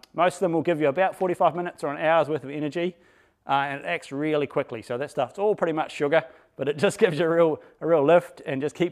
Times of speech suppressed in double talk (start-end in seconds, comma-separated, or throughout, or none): none